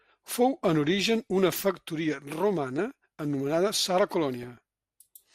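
MP2 compression runs through the whole speech clip. The top end sounds dull and the remaining detail has a granular, gurgling edge. This is likely MPEG Layer II coding at a low rate around 80 kbps, where upper sub-bands are starved of bits and switch off while the rest are coarsely quantised.

DAB burbling appears from 4.41 to 4.58 s as a brief burst of burbling, with short blips of noise in single sub-bands. Bit errors, on the order of 0.3 percent, got past error correction and corrupted samples across 25 frames.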